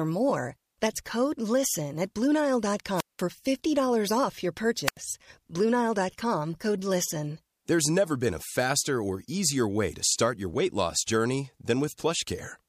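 At 2.95 s and again at 4.86 s, the speech hits a wireless microphone squelch dropout. The radio signal fades, hiss swells, and the receiver's squelch mutes the output. The holes last about 189 ms and 84 ms before the sound returns.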